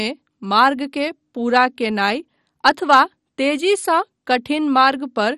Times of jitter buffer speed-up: none

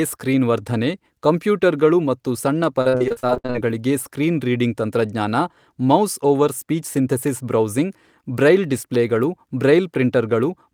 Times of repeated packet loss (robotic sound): 2.81-3.56

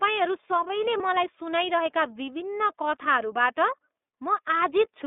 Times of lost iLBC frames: 0.97-1.01

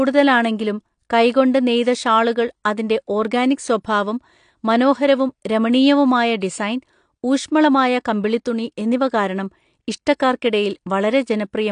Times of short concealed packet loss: none

